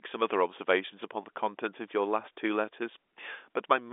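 Nothing stood out on listening to this speech, which comes across with the narrow band of an ordinary telephone line.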